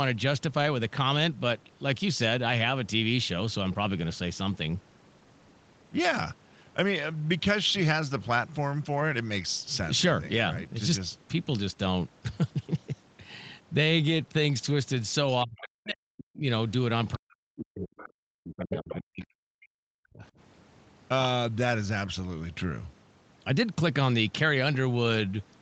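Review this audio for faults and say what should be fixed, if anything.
Speech suppressed in double talk occurs from 15.44 to 16.46 s, 17.14 to 17.92 s and 18.39 to 20.22 s. The speech sinks by as much as about 40 dB while the far side talks. The likely cause is the echo canceller failing to separate the local talker from loudspeaker echo, so it attenuates both. Unlike a network dropout, the gaps follow the other party's speech rather than occurring at random. Tuning the canceller's double-talk detector so it holds back suppression during simultaneous speech would prevent this.

The other side's voice leaking through appears as a brief scrap at 17.97 to 18.09 s, about 20 dB below the speech, and again from 18.59 to 18.95 s, about 10 dB below. This is likely residual echo the canceller did not remove. It is distinguishable from room crosstalk because it comes and goes in bursts alongside the suppressed passages. 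Using a headset, or giving the canceller a clean, time-aligned loudspeaker reference, would prevent it.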